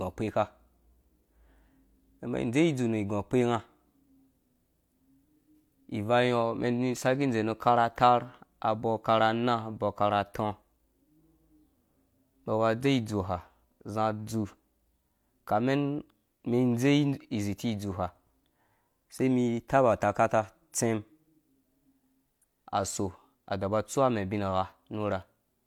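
No technical faults turn up anywhere in the speech recording. Nothing breaks up, drops out or shifts at any point along its length.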